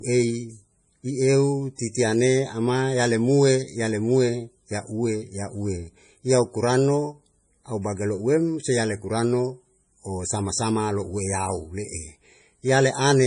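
MP3 compression artefacts run throughout the speech clip, from start to finish. The audio stops dead at about 10.5 kHz, a fixed ceiling where the encoder has dropped the treble, and the damage is heavy, which fits a low bitrate around 32 kbps. With so few bits, weak frequency components are zeroed and then reappear from frame to frame, giving a watery, swirling texture. This is most likely an MP3 encode made at that starved rate.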